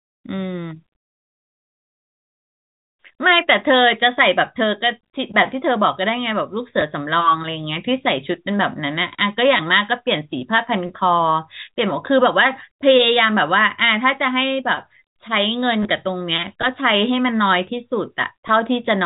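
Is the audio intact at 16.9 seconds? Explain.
Yes, at 16.9 seconds the speech runs through cleanly with no dropout, click or distortion, only the narrow 4 kHz ceiling of G.711 telephone coding.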